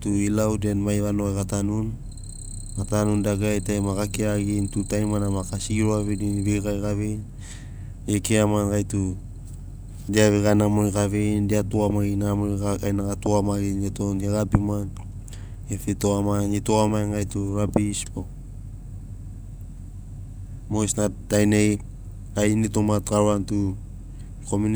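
No technical faults can be heard anywhere in the recording.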